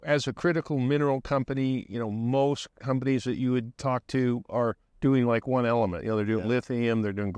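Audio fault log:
Nothing to log here; I couldn't hear a single fault anywhere in this speech clip.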